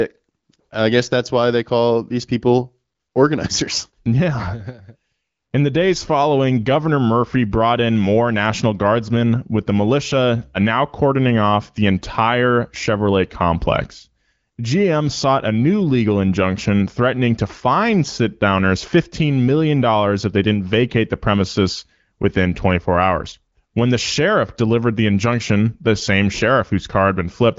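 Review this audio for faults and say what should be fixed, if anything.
Nothing here needs fixing. The speech comes through an AMR wideband (HD Voice) codec at 15.85 kbit/s, which leaves nothing above 7.5 kHz and a light coded texture, as expected at that rate.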